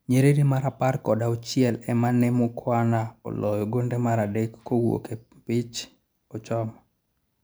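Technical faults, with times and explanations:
Nothing technical jumps out here; the speech comes across without any audible glitches or defects at any point.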